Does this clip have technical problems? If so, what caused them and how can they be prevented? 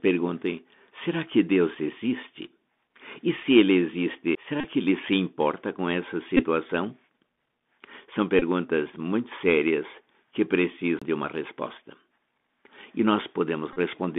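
Yes. The speech has passed through a Bluetooth CVSD headset codec for its whole length, and it also has two kinds of short dropout.

Bluetooth CVSD headset codec: The headset link carries the audio as a single up-or-down bit per sample, which fits CVSD running at 64 kHz, with a step size that adapts to the signal. When loud, bright sounds change faster than the step can follow, they distort, and s sounds come out scratchy over a granular hiss. The line passes only about 200 Hz to 3.6 kHz, so the speech sounds thin and muffled. To prevent this, record through a wired microphone or a headset using a wideband codec.

Bluetooth headset packet repeated: At five points, voice packets between headset and phone were lost, and the chip played the previous packet's bits again in their place. These are at 1.75–1.77 s (7.5 ms lost), 4.61–4.67 s (33.8 ms scattered over 37.5 ms, with a run of roughly 30 ms), 6.37–6.45 s (18.8 ms), 8.39–8.43 s (22.5 ms) and 13.73–13.79 s (30 ms). 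Each run of repeats produces a brief buzz near 267 Hz. To prevent this, keep the headset close to the phone, with a clear path and little 2.4 GHz interference.

CD skip: At 4.35 s and at 10.99–11.02 s, the laser jumped to a different turn of the disc's spiral. The player muted very briefly at 4.35 s and for around 30 ms at 10.99 s, then resumed from another point. Each skip is heard as a tick or short gap followed by a sudden jump in the speech. To prevent this, use a clean, undamaged disc on a steady, vibration-free player, or play from a ripped file instead.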